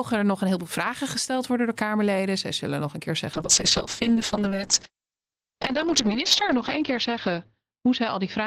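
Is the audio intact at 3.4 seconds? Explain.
No. From 3.34 s to the end of the clip the speech turns rough and muffled, losing its top end. This is a call bitrate drop: the encoder falls from 48 to 6 kbps and narrows its bandwidth from 20 kHz to 8 kHz, coding everything more coarsely.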